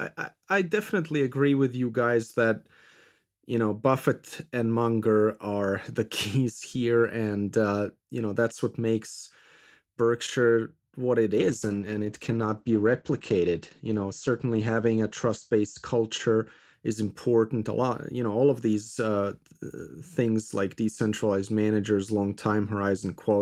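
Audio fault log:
11.38–16.79 s call bitrate drop: sound turns coarse and muffled, fitting a fall from 32 to 12 kbps; spectrogram shows content above 8 kHz cut off, lowest for about 3.5 s.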